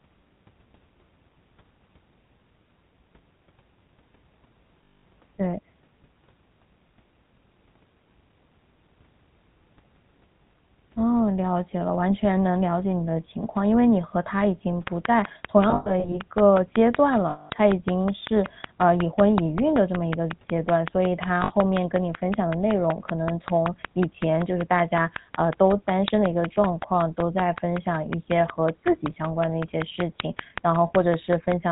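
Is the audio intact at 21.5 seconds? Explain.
No. Lost GSM frames occur from 21.44 to 21.54 s, which covers the moment asked about. About 60 ms of coded speech never arrived, which fits three consecutive 20 ms frames. The decoder filled the hole by reusing the filter and excitation settings of the last good frame, repeating them. The speech therefore doesn't cut out cleanly. Instead it smears into a short, rough, metallic ring that sustains the preceding sound before the signal resumes.

The GSM full-rate codec also shapes this moment, as it does the whole recording at 13 kbps. It models the vocal tract and drives that model with a sparse, regularly spaced pulse excitation, and it passes nothing above 4 kHz. The result is a plainly audible buzzy, gravelly roughness with a dulled top end, and the concealment ring at 21.5 s sits on top of that texture.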